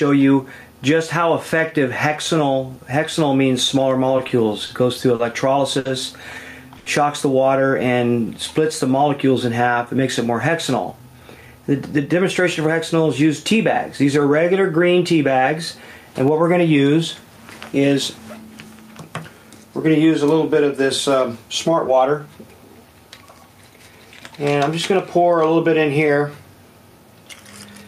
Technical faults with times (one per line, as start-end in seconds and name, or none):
0.00-27.88 gain pumping
4.17-5.87 repeated stalls (stutter)
6.78-6.88 short stall from a late packet
7.92-8.93 jitter buffer slow-down
10.92-12.75 jitter buffer speed-up